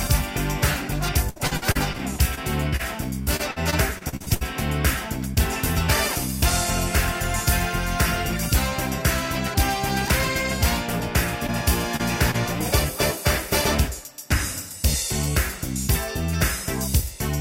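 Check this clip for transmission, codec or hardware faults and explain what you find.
Two transmission faults are audible, both from network packet loss hidden by the decoder.

From 1.29 to 2.81 s and 3.23 to 4.43 s, choppy, robotic sound: repeated packet loss, with gaps up to about 65 ms patched by extending the previous sound.

At 11.47–11.50, 11.96–12.01 and 12.31–12.36 s, brief smears or wobbles: short concealed packet loss, where roughly 20 ms holes were filled with continued sound and blended back.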